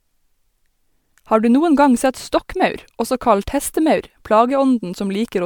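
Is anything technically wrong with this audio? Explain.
Yes. Generation loss runs throughout the speech. The cause is likely repeated lossy re-encoding: the audio appears to have passed through MP3 around four times, at a quality that fits 128 kbit/s. Each decode and re-encode quantises again on a shifted frame grid, so noise and spectral gaps pile up. The result sounds swirly, smeared and hollow, and consonant attacks are blurred, even though the bandwidth still extends to about 20.1 kHz.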